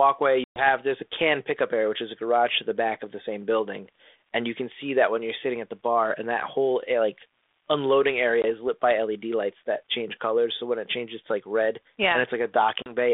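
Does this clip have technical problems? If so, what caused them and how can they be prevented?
Yes. The sound drops into hard-edged silence at 0.44 to 0.69 s (about 120 ms lost, several packets' worth, just before "there's a can pickup"), 8.42 to 8.45 s (between "whole eh like unloading" and "is lit by") and 12.82 to 12.94 s. Each gap ends with a few tens of milliseconds of slightly distorted audio.

This is packet loss on an ADPCM call. The missing packets were replaced with silence, and because the G.726 decoder builds each sample from its own running prediction and step size, it fell out of step with the sender until it resynchronised. A jitter buffer with packet-loss concealment, plus a more reliable network link, would prevent it.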